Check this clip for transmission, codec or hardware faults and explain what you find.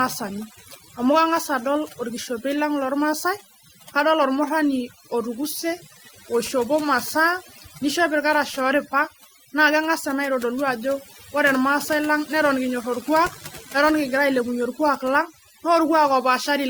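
Two faults run through the whole speech clip: mains buzz and overdone noise removal.

Mains buzz is present from start to finish as a steady, raspy buzz sitting fairly high, roughly 15 dB below the speech. It comes from sharp switching spikes on a 50 Hz supply, entering through a dimmer, rectifier or poor shielding, with harmonics stacking up into the kilohertz range.

Overdone noise removal is also present throughout. The gaps between phrases drop and break up into twinkling specks. A noise reducer set too hard cuts individual frequency bands whenever they approach its noise estimate, taking the quieter parts of the voice with them.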